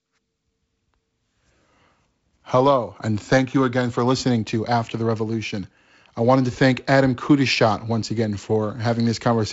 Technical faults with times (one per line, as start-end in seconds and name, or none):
none